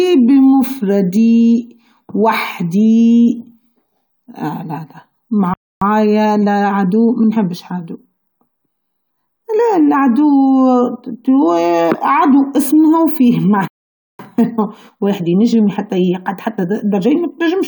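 A speech recording. The sound cuts to silence at 5.54 s for about 0.28 s, and again at 13.68 s for about 0.52 s. These are playback stalls, likely from the player starving of data. After each gap comes time-compressed catch-up. From 5.82 to 7.66 s the speech runs about 1.15 times fast, and from 14.19 to 17.19 s about 1.1 times, both at normal pitch.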